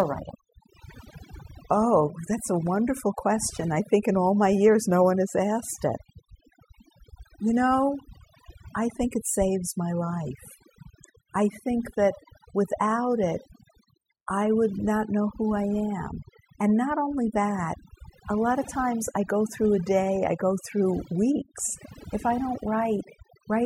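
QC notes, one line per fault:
Throughout: overdone noise removal. Noise reduction was set far too aggressively, so frequency bands near the estimated noise floor are pulled down or cut, taking quiet parts of the speech with them. The gaps go near-silent with twinkling specks, unlike plain low-pass dullness.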